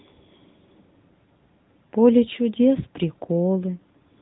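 From start to finish the speech sounds muffled and buzzy, with a synthetic edge and nothing above about 3.9 kHz. That is the AMR narrowband mobile codec: 8 kHz sampling and a pulse-driven vocal-tract model, plainly audible at what sounds like a high 10.2 kbps mode.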